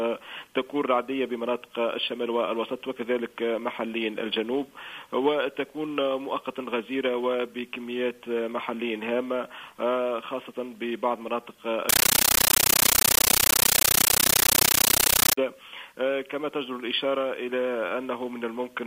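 At 11.89 s the sound is replaced by very loud, chattering static. It lasts until 15.38 s. This is a compressed stream played as audio. An AC-3 bitstream reached the output as if it were ordinary samples and was never decoded. Each coded frame comes out as a 13.3 ms burst of noise, then silence from the zero padding. The bursts repeat 31.25 times a second, giving the harsh rattle. Their density fits a 640 kbps stream.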